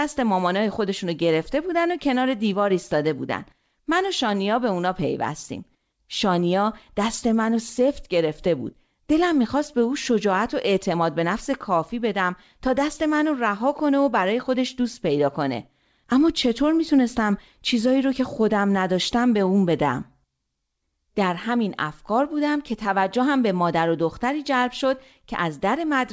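No faults found in the speech; the band stops at 8 kHz, which fits a G.722 wideband call path working as intended.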